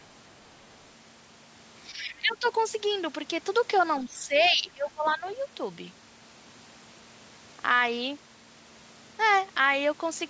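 From 1.92 to 2.45 s the speech level dips by up to about 15 dB in broken patches, and the talker's voice thins and partly cuts out. This is speech suppressed in double talk. Both ends were likely talking at once, and the echo canceller, unable to separate its own talker from loudspeaker echo, turned everything down. At 2.31 to 2.47 s the other side's voice leaks through as a faint scrap roughly 30 dB below the speech, likely echo residue the canceller failed to remove from the microphone signal.

The same suppression returns for longer, from 4.04 to 5.24 s. The voice again drops by as much as about 15 dB and breaks up across roughly a second of the span, likely the echo canceller ducking during overlapping talk. Inside it, a brief burst of the other side's voice leaks through around 5.06 to 5.11 s, somewhat louder than before at roughly 25 dB below the speech. It is consistent with likely incomplete echo cancellation.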